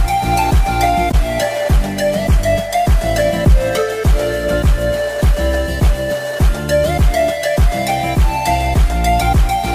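Corrupt frame decoded, from 1.11 to 1.15 s: a sharp, loud glitch lasting about 40 ms, which points to roughly two damaged frames. Flipped bits in the compressed data were decoded anyway, scattering energy to the wrong frequencies and producing an abrupt error peaking around -5 dBFS.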